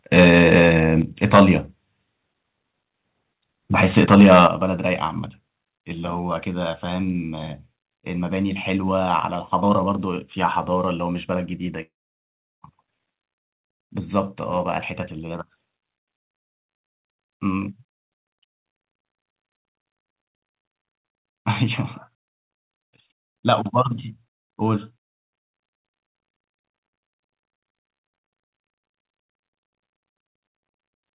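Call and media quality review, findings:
Microphone overload, 0.16–0.70 s, 1.23–1.51 s, 3.83–4.47 s: harsh crackle on the loudest speech peaks. Likely cause is excessive mic input gain driving the converter about 6–8 dB past full scale, flattening a few percent of samples.

Microphone volume stepped down, 1.02 s (about −5 dB) and 4.47 s (about −9 dB): abrupt level drop in speech and background, each right after a clipped burst. Likely the call client's automatic gain control cutting device input volume in one step.

Long network dropout, 11.82–12.64 s: about 0.8 s of speech missing. The last sound smears into a fading buzz, then near-silence for most of the gap before audio resumes past the lost section. Likely cause is a packet loss burst, with the receiver concealing the gap. The G.711 call path limits everything to 4 kHz.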